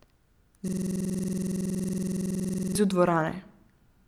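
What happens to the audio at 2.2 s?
At 2.2 s the speech is replaced by a rapid, mechanical stutter-buzz repeating about 21.5 times per second. This is a system hang loop from 0.68 to 2.75 s: with the system frozen, the audio hardware replayed the same 46.44 ms stretch roughly 45 times, which fits a 2048-sample ring buffer.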